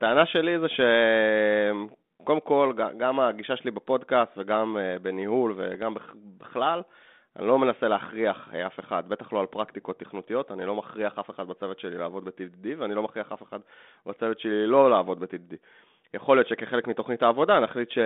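Bit errors on an ADPCM link hit at 5.74–5.82 s and 9.47–9.57 s. Flipped bits throw off the decoder's step size and predictor, so pops ring into short rough bursts.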